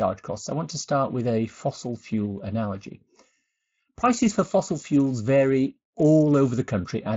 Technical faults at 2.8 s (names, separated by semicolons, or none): Speex codec